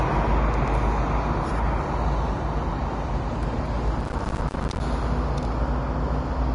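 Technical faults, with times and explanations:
Throughout: low-bitrate audio saved at a high bitrate. Nothing is present above 10.6 kHz, and the sound keeps the artefacts of the first encoding. This is likely a low-bitrate Vorbis encode later saved as high-bitrate MP3. The second encode cannot restore what the first removed.
4.00 to 4.80 s: processor overload crackle. A dense, gritty tearing rides on the sound, then stops. The processor missed many buffer deadlines in a row, dozens of them. Each miss left a short hole of silence, about one 10 ms buffer long.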